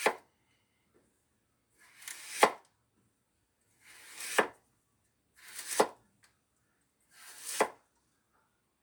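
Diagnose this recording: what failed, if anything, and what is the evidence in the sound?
Nothing failed; no faults are audible in this recording.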